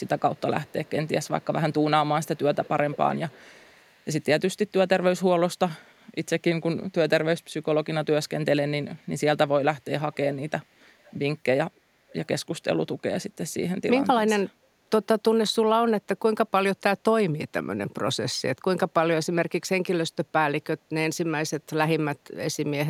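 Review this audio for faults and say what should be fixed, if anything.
Echo leak shows up at 0.05–1.73, 2.24–4.06, 10.12–10.5, 10.99–11.19 and 12.09–12.27 s. It's a faint copy of the speech trailing about 307 ms behind, mostly very quiet but much stronger around 10.1 s. That's likely the far end's echo canceller letting its loudspeaker pickup slip back through. Worth getting that side onto a headset or sorting out their canceller.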